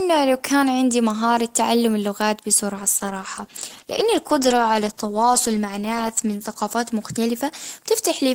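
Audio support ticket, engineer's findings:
Call bitrate drop, 2.8–7.57 s, after "عندي مهارة تعلم اللغات": speech turns coarse and muffled, worst for 3.45 s; fits Opus starved from 32 to 14 kbps, highs cut.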